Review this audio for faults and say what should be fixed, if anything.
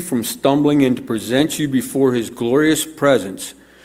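No faults; nothing needs fixing.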